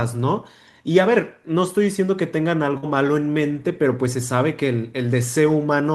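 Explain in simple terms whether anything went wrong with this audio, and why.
At about 2.77 to 2.86 s there is a burst of packet loss: a short run of the speech never arrived, so the player stretched the last sound for about 52 ms while fading it out, then jumped ahead. Unlike a plain dropout, there's no dead silence, and about 60 ms of speech is simply gone.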